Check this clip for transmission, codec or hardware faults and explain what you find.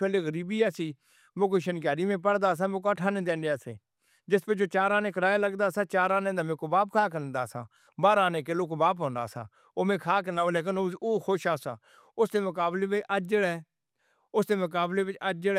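No fault of any kind can be heard in this speech recording. Nothing in the audio needs a timestamp or an explanation.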